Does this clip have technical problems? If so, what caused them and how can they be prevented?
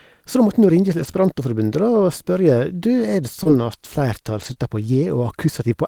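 Yes. Between 0.99 and 4.57 s the speech has scattered short gaps: about three tiny packet losses, none longer than roughly 20 ms, totalling 60 ms of missing audio. The receiver covered each hole by extending the preceding sound, smoothing about 160 ms in all, which leaves brief ticks and smeared hiccups. Unlike one long dropout, these are isolated and leave the speech clear. A larger jitter buffer and forward error correction would prevent them.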